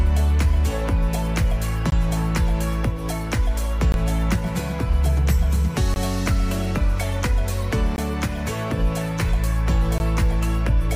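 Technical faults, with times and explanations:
1.90–1.92, 3.92–3.94, 5.94–5.96, 7.96–7.98 and 9.98–10.00 s: gap between chunks. Brief 20 ms hard-edged silences recur every 2 s, as silence is inserted at each join between 2-second chunks without losing any sound.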